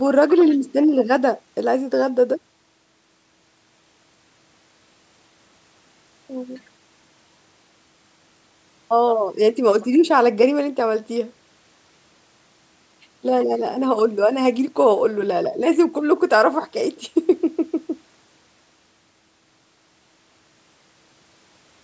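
No technical faults can be heard anywhere in this speech. It carries the sound of a call's microphone processing, with the lowest bass trimmed away and nothing above 8 kHz, which is normal for that path.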